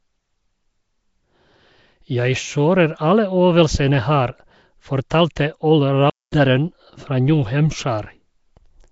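Throughout the speech there is plainly audible codec damage, with a rough, hissy halo and a smeared, underwater quality, and nothing above 7.7 kHz. This is likely Nellymoser compression at a rate that fits a 32 kbps stream. Unlike ordinary broadband noise, the hiss tracks the speech, because bands given no bits are filled with noise.

At 5.10 s and again at 5.36 s, a short hiss arrives about 10 ms ahead of a sharp attack, which sounds softened. This is pre-echo: block-wide quantisation noise, sized for the loud onset, spills into the quiet just before it. Unlike reverb, the smear comes before the sound, not after it.

From 6.10 to 6.32 s the audio stops mid-flow for about 220 ms and then continues. This playback stall likely happened because the player ran out of data or its thread was blocked. It is a clean silent gap, not a click or a repeated fragment as with a buffer glitch.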